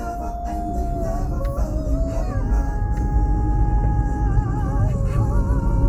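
A call bitrate drop hits this recording of sounds at 3.57 s: the bandwidth estimate collapses and the encoder is pushed to code with far fewer bits, consistent with a fall from around 96 kbps to roughly 15 kbps. It stays at that floor for about 2.27 s, through to the end of the clip. The coarser coding makes the sound rough and watery, and the upper frequencies are cut away, leaving it muffled.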